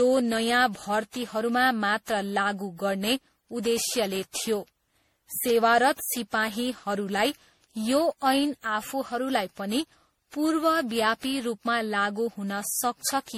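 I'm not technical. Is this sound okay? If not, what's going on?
No. The speech sounds swirly, smeared and hollow from start to finish, and word beginnings are blurred. This is generation loss. The likely cause is the recording being squeezed into MP3 about ten times over, each pass adding new damage.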